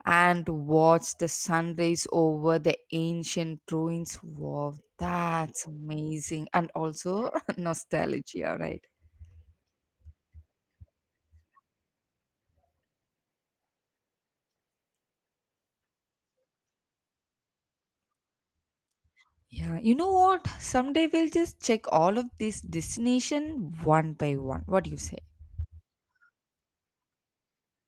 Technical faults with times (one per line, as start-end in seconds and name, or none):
none